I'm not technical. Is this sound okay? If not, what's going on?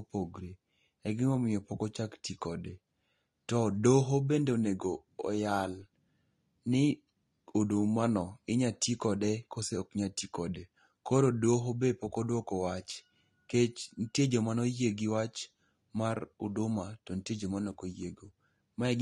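No. Throughout the whole clip the speech sounds dull and plainly watery. That is the mark of AAC compression, likely from heavy data squeezing. Nothing above about 12.5 kHz survives, and the hiss sounds turn swirly and fizzy, unlike a plain muffled recording.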